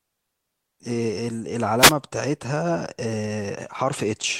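A wireless microphone noise hit occurs from 1.78 to 1.94 s. The analogue FM radio link briefly fades as reflected signals cancel, so receiver noise rises over the speech for about 0.17 s, heard as a short swish or burst of static.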